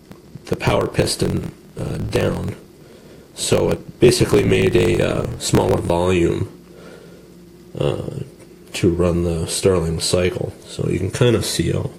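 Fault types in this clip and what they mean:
Block size mismatch (truncated): one stage is handing over longer blocks than the next one reads, so the tail of every block just gets dropped. From the start to about 5.90 s you hear a steady buzz at roughly 43.1 Hz, the block rate, which fits a 1024-sample read size. The audio also runs about 1.12 times fast, since those discarded tails add up, while the timbre stays about where it should be.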